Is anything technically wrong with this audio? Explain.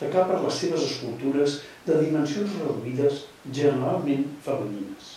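No, nothing stood out as technically wrong when listening to this speech recording.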